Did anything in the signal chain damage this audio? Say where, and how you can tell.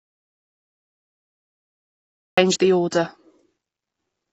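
Yes. An audio dropout to silence runs from the start to 2.38 s, ending at "the order". It shows as a dead-flat waveform with no room tone, likely from input loss.

AAC compression sits at the codec stage, with a dull, smeared texture throughout. The spectrogram shows a hard ceiling at 8 kHz and patchy bands, likely from a low-bitrate AAC-LC encode, perhaps around 24 kbps.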